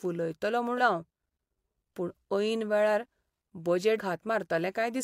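At 0.75 to 0.81 s and again at 3.95 to 4.00 s, damaged data in the compressed stream makes the decoder misread frames and lose sync, producing brief glitches.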